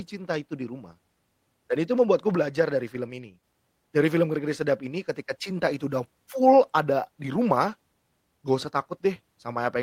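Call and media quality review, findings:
Sudden gain jump, 2.35 to 3.44 s, after "dan itu membuatku", restored before "dari film". Speech and noise floor drop together by about 4 dB. Waveform envelope shows square step edges; spectrogram darkens uniformly across all frequencies. Likely an unramped digital gain change in processing.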